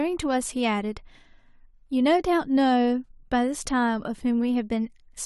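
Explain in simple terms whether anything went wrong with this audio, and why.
Nothing went wrong with this speech recording that a listener would notice. At no point does anything interrupt or spoil the sound.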